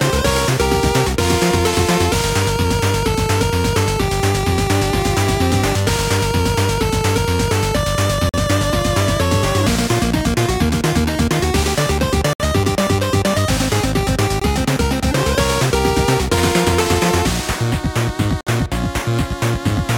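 Gaps between stream segments cut hard-edged silences at 8.29 s (46 ms), 12.33 s (67 ms), 14.40 s (20 ms) and 18.41 s (58 ms), where 2-second segment timestamps misalign. Nothing is lost; silence is inserted.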